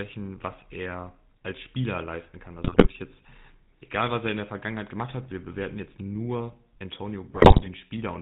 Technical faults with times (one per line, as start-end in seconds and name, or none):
0.00-8.22 GSM full-rate codec
2.64-2.93 GSM bit errors
7.30-7.69 GSM bit errors